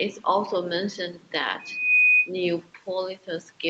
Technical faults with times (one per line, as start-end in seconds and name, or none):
1.59-2.30 loudspeaker feedback squeal